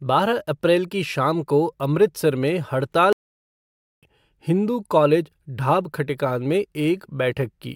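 At 3.13 s the speech halts abruptly and stays silent until 4.03 s, a gap of about 0.9 s, before resuming. This is a playback stall, most likely caused by the player's buffer running dry or its thread being blocked, so output simply stopped until data arrived again. It sounds like a sudden dropout in mid-flow. On a waveform the trace collapses to a flat line for that span, and a spectrogram shows a clean vertical band of empty silence.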